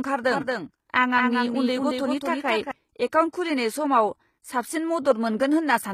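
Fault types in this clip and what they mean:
HE-AAC compression: likely a low-bitrate HE-AAC encode, around 20 kbps, rebuilding treble from copied lower bands, so the upper spectrum plainly mismatches the original harmonics throughout.
doubled audio track: likely a second copy from a slower path or misaligned edit, trailing about a fifth of a second, a few dB quieter, abruptly present from 0.31 to 2.71 s.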